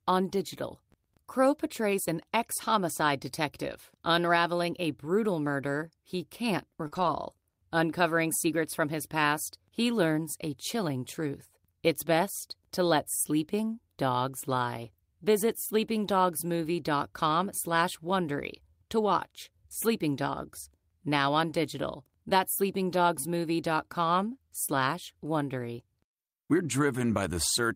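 At 6.87 s, a short concealed packet loss runs to 6.93 s: about 40 ms of the call arrived too late for the decoder, which extrapolated the preceding sound to fill it and then crossfaded back. It is heard as a brief smear or wobble.

Overlapping it, from 6.91 to 7.09 s, comes a lost packet rebuilt from error correction: 100 ms, which fits five 20 ms packets, played from the low-bitrate redundant copies carried in following packets. There is no gap, but that stretch sounds rougher and noisier.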